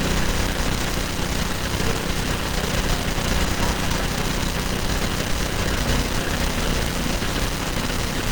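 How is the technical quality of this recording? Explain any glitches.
The technical quality is compromised throughout. Opus compression, likely at about 16 kbps in hybrid mode, makes the audio hoarse and grainy, not MP3-like swirling, while keeping the full bandwidth up to about 20.2 kHz.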